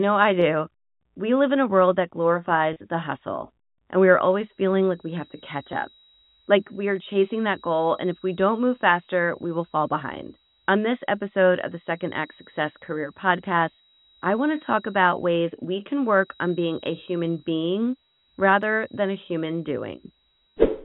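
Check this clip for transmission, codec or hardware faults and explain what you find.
Yes, there are two faults: short gaps concealed by pitch repetition, and a feedback whistle running under most of the clip.

Packet loss with pitch repetition occurs at 2.73–2.76 s (about 30 ms, which fits three lost packets) and at 5.72 s (about 10 ms). The receiver fills each gap by replaying the last pitch period, so the sound briefly holds with a buzzy edge. The waveform shows identical repeated cycles, and the spectrogram shows frozen, flat harmonics.

A feedback whistle runs from 4.17 s to the end. It is a steady 3.8 kHz tone well below the speech, heard as a thin whistle that swells and fades slowly in level. The likely cause is a loudspeaker-to-microphone loop held right at the edge of feedback. On a spectrogram it appears as an unbroken horizontal line just under the 4 kHz telephone ceiling.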